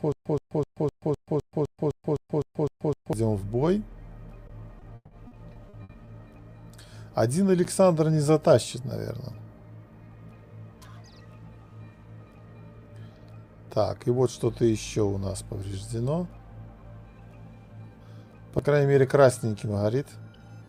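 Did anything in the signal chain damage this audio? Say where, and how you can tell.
Yes. From the very start of the audio until 3.13 s there is a stutter with silent gaps. It is most likely a playback or streaming stall: each time the player retried, it replayed its last fragment and then ran dry. You hear a 123 ms burst repeat 12 times at an even 255 ms period, with about 132 ms of digital silence between bursts. Whatever should have played across that stretch is simply gone.

Between 4.47 and 6.09 s the network stage shows repeated packet loss, which gives a robotic sound. Packets went missing eight times in quick succession, and the receiver covered each hole by stretching the preceding sound. That concealment fills 380 ms in total, about 23% of the span, and the longest gap is 160 ms. The result is choppy audio with pieces missing.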